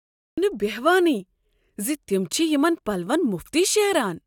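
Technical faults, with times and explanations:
0.00–0.38 s, cut-off start: The speech clip opens with digital silence, and the sound then appears abruptly at 0.38 s, already partway through. There is no natural onset and no gradual rise from the room or the breath. The recording or stream began late, so the beginning of that sound was never captured. What remains starts mid-waveform. That is why the entry sounds chopped rather than spoken into.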